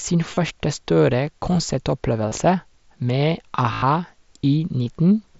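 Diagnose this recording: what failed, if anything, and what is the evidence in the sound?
The failure is concealed Bluetooth headset packet loss, on the wireless link between headset and phone, beneath the light grain of the mSBC codec. Three gaps are patched: 0.34 to 0.37 s, 2.29 to 2.32 s, and 3.73 to 3.82 s. The first two last about 30 ms and 23 ms. The third runs 90 ms, which fits a dozen lost packets. It becomes a buzzy tone held at full level. The receiver repeats the best-matching recent stretch of waveform. A slight warble follows as real speech returns.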